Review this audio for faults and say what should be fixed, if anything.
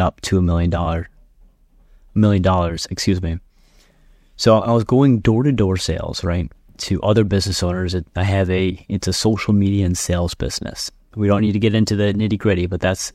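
Nothing to fix: no audible faults anywhere in the speech recording.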